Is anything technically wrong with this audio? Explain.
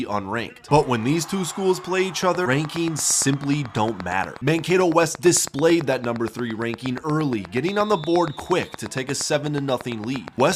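Yes, there are three faults.

From 2.23 s to the end at 10.53 s, a train of clicks ticks over the sound at a regular pace of about 8.5 per second, some seventy near-identical pops peaking roughly 10 dB above the audio and audible in pauses too. The likely cause is interference from nearby equipment or a faulty connection or power supply injecting a repeated pulse.

Between 2.45 s and 2.47 s, the audio abruptly jumps forward, a skip ahead with no gap or fill at the join. Roughly 400 ms of material vanished, dropped in transit or discarded by an overflowing jitter buffer while later audio was already waiting.

From 4.41 s to 5.78 s the sound runs about 6% fast at unchanged pitch, giving a hurried feel. This is a jitter buffer speed-up: holding more audio than its target, the receiver trimmed around 100 ms in short pitch-period pieces to reduce delay.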